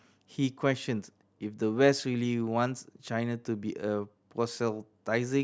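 No technical faults are audible.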